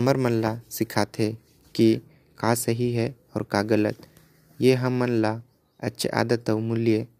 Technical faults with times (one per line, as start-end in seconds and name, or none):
none